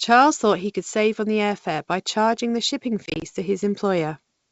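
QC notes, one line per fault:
3.06–3.23 s, packet loss on an ADPCM call: the speech breaks into a rapid string of hard-edged dropouts, each no longer than 20 ms, totalling 80 ms of silence scattered over 160 ms, which fits a handful of lost packets. Each gap knocks the decoder's adaptive predictor and step size out of step with the sender's, so the returning speech briefly sounds slightly distorted. The surrounding G.722 wideband coding at 64 kbit/s stays clear.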